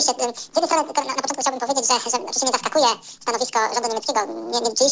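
Samples captured at one rate are being played back at double that rate with no conversion, which fits 8 kHz material run at 16 kHz. This is a wrong sample rate fault throughout: the audio runs at twice normal speed and sounds a full octave (12 semitones) high.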